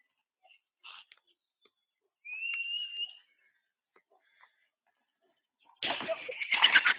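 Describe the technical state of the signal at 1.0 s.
At 1.0 s the signal is intact, with no dropout, clipping, distortion or other fault audible at that point.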